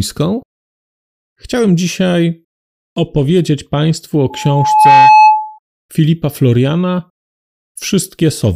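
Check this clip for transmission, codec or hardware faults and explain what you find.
A loudspeaker feedback squeal runs from 4.30 to 5.59 s: a microphone picked up the loudspeaker it was feeding, and loop gain passed unity at 858 Hz. That single tone swells over well under a second into a squeal roughly 10 dB above the speech.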